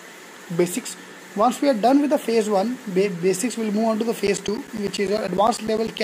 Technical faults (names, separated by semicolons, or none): periodic USB or driver dropouts